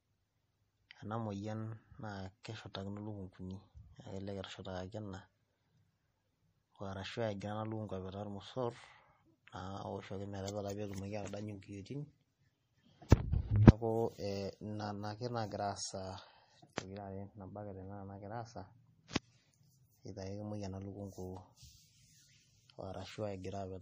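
MP3 compression, throughout: treble stops at 15.3 kHz and weak detail swirls and warbles, plainly audible damage that likely comes from a low bitrate around 40 kbps. Pre-echo, 16.76 to 16.78 s: quantisation noise spread across the coding block leaks ahead of a sharp attack, giving about 22 ms of hiss and a softened onset.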